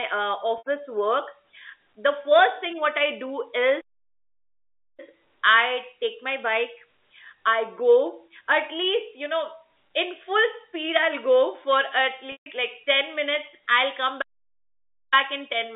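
At 0.58 s, 80 ms of the speech goes missing, which fits about four 20 ms packets, and the receiver fills the hole by repeating the last pitch period, so the sound briefly holds on a buzzy, slightly frozen tone. This packet loss with pitch repetition is set apart from a stall by that sustained buzz, which bridges the gap instead of leaving silence.

From 3.81 to 5.00 s comes a playback stall: the output drops to dead silence for about 1.17 s, with no held tone or fade, then resumes. The likely cause is the player running out of data or its thread being blocked.

At 12.32 s a longer packet loss with pitch repetition, 140 ms, begins with the same repeated-pitch buzz but fades toward silence before the speech returns through a short cross-fade. The gradual fade and soft re-entry distinguish it from the abrupt cut of a stall.

A second playback stall runs from 14.21 to 15.14 s, about 0.9 s of sudden, complete silence within the narrow telephone-band G.711 sound, before playback picks up again.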